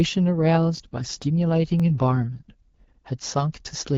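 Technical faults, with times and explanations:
0.46–2.41 s, AMR rate drop: The link had to give up speech bits for error protection, so the AMR-WB coder switched down to a leaner mode. The roughness fits a drop from 12.65 to 8.85 kbit/s. The vocal-tract model and pulse excitation are coded more coarsely, so the speech turns harsher and more synthetic. The bandwidth holds steady and there is no gap. Clarity returns at 2.41 s, back to the lightly coded sound of the 12.65 kbit/s mode.
0.77–0.80 s and 1.80–1.82 s, overlapping chunks: The audio was handled in blocks of about one second, and each new block began slightly before the previous one finished. At each join, 23 ms of sound plays a second time. This brief repeat lands as a small stutter or click, and the two events are spaced about one chunk apart, which gives the regular rhythm that points to a fixed-size block boundary rather than a network dropout.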